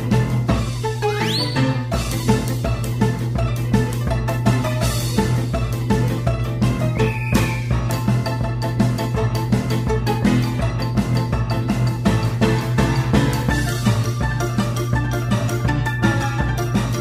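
From the first moment to the last there's mains hum, a steady low 60 Hz drone with a few low harmonics riding on top, sitting roughly as loud as the sound itself. That's the power line leaking in, from a ground loop or a nearby transformer.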